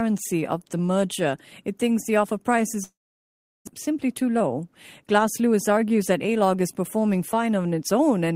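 Speech carries two faults. Right after "thinks the offer price", from 2.83 to 3.69 s, the sound smears into a brief fading buzz and then drops to near silence before returning with some of the speech gone, most likely a long network dropout that the receiver papered over. From 3.87 to 6.01 s the talking runs noticeably hurried at an unchanged pitch, about 110% of normal speed. This is a jitter buffer speed-up: the receiver trims tiny pitch-period slices to shed roughly a fifth of a second of built-up delay.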